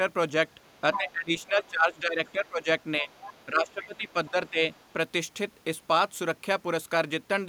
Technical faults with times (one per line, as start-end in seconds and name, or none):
0.64-2.48 other side's voice leaking through
0.97-3.10 speech suppressed in double talk
3.10-3.45 other side's voice leaking through
3.46-4.62 speech suppressed in double talk
3.83-4.86 other side's voice leaking through